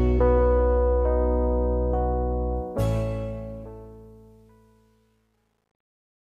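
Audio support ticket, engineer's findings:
Truncation distortion on the fade-out, 2.56 to 6.40 s. Grit builds as the level drops, worst from 3.86 s to the end. The gain stage rounds to coarse steps with no dither, consistent with only 10 bits kept.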